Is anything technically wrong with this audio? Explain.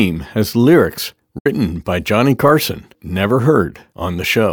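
Yes. Just after "has lyrics", from 1.38 to 1.46 s, the speech fades out in about 8 ms and falls silent. This is a digital broadcast dropout: the receiver muted through roughly two lost frames.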